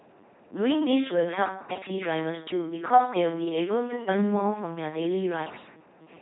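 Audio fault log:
throughout, LPC-10 vocoder: the speech is a harsh, buzzing robot voice, with stray buzz or hiss wherever voicing is misjudged, and nothing above 3.9 kHz. Each moment is rebuilt by a short all-pole filter fed either pulses or noise, consistent with a 2.4 kbit/s coder.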